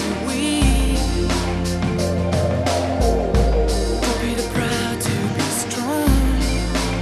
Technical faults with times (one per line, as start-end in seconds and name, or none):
none